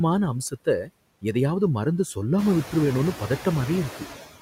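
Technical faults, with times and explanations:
Throughout: noise suppressor artifacts. The suppressor tracks the bands it judges to be steady noise and pulls them down by about 14 dB, frame by frame, so the background drops away in the gaps between words and comes back up beneath the speech whenever the voice opens the gain. This pumping is clearest after the room noise itself steps up by about 13 dB around 2.5 s, leaving it roughly 13 dB below the speech.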